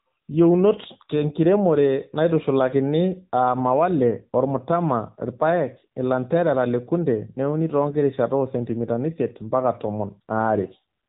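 Speech runs throughout with AMR narrowband mobile codec damage: the AMR-NB coder models the vocal tract and rebuilds the sound from a few pulses per 5 ms subframe, giving a plainly buzzy, synthetic quality that fits a mid-to-low mode around 7.95 kbps. On a spectrogram, all energy stops at a flat ceiling near 3.8 kHz for the whole clip, with empty space above, because narrowband sampling passes nothing higher.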